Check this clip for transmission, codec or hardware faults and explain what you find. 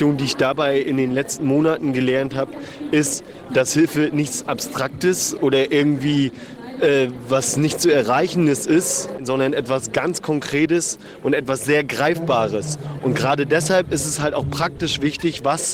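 One fault is audible. At 14.77 s there is short concealed packet loss. About 10 ms never arrived, so the decoder extended the preceding sound, leaving a brief smear.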